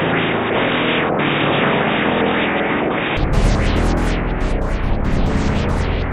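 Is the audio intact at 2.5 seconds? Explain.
No. An input switched to a poorer device likely explains 0.0 to 3.17 s, which covers 2.5 s. That input passes a narrower band, so nothing reaches above 3.8 kHz and the sound is dull and boxy. It adds its own noise, far below the signal, and there's no gap or level jump at the switch.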